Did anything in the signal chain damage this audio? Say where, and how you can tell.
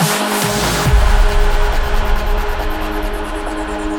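No, nothing in the chain audibly damaged this audio, so there's no stage to point at here.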